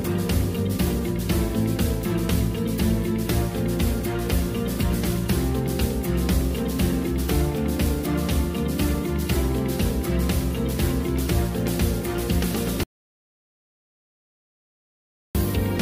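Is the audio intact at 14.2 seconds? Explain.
No. The input was likely lost, through a disconnected device or a failed link, while the recorder kept writing silence, causing an audio dropout to silence from 12.83 to 15.35 s. The sound cuts off abruptly into about 2.5 s of dead silence with no room tone before returning.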